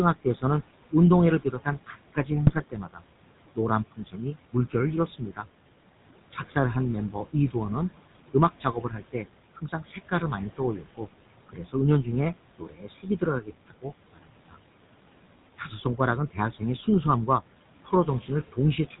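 Speech runs through the whole clip over room noise sitting about 17 dB below the voice, and two processing faults are present from start to finish. The first is noise suppressor artifacts. The suppressor pulls the background down by about 18 dB in the gaps, then lets it swell back under each phrase. So the noise floor pumps with the speech. The second is the GSM full-rate codec, and its damage is plainly audible. The band stops at 4 kHz, and the pulse-train excitation, which keeps only every third sample, gives the voice a buzzy, gravelly edge. That character fits the 13 kbps full-rate coder. The suppressor also produces speech cut by the noise suppressor in five stretches: 0.15–3.02 s, 3.55–5.46 s, 8.33–14.57 s, 15.58–16.61 s and 17.85–19.0 s. Here it mistook parts of the speech for noise and ducked them with the background, by up to about 17 dB in the first two, about 19 dB in the third and about 14 dB in the last two. 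Soft consonants and word ends come out swallowed or faint. Only about half a second is affected in the first stretch, but roughly two seconds of the long 8.33–14.57 s stretch are affected. GSM bit errors hit from 2.47 to 2.63 s, inside the first cut stretch. Corrupted filter, pitch and gain parameters make the decoder produce a short burst of squawking and gargling with level jumps. That 0.16 s span fits about eight consecutive 20 ms frames being damaged on a weak link.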